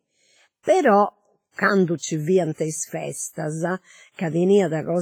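Throughout the speech, heavy ringing and a washy hiss that breathes with the signal point to WMA compression, likely WMA 1 at a bitrate that fits 24 kbps. A spectrogram shows noise smeared across long blocks, weak detail zeroed into gaps, and nothing above 21.3 kHz.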